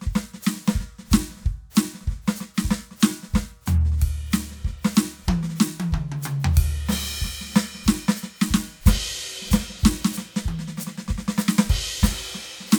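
The music carries no audible technical faults at any point in the clip.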